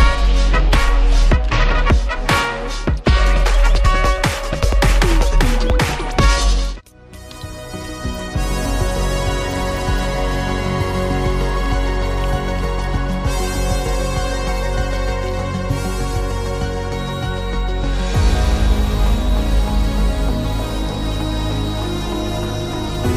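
From 16.88 s to the end, a feedback whistle appears: a thin 3.8 kHz tone at one pitch, slowly swelling and fading, sitting well below the sound, likely from a speaker-to-mic loop hovering at the edge of feedback.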